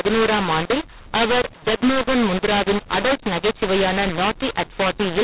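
Speech heard through a telephone channel, with mu-law and A-law mixed up for the whole clip: the audio was coded with A-law and decoded as if it were mu-law, so every level comes out scrambled. The sound is harsh and gritty, and the pauses fill with hiss instead of falling silent. On a waveform the quiet gaps sit well above zero and the peak shapes look distorted. A spectrogram shows broadband noise smeared across the band, stopping at the 4 kHz ceiling of the 8 kHz telephone coding.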